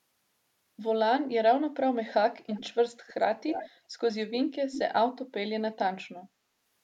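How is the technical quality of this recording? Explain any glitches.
The recording has an echo leak, heard as brief delayed repeats of the speech at 2.49–2.65, 3.07–3.14, 3.47–3.70, 4.34–4.39 and 4.72–4.84 s. Each trails the original by 316 ms, sitting roughly 10 to 30 dB below it. The likely cause is a far-end loudspeaker whose echo canceller let residual pickup return.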